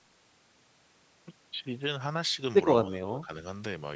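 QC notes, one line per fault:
2.84–3.30 s, speech suppressed in double talk: the speech dips sharply by roughly 20 dB, with about 0.4 s of it affected in total. The likely cause is an echo canceller that could not tell the near talker from loudspeaker echo while both sides spoke and turned everything down. On the waveform the envelope drops. On the spectrogram the harmonics fade.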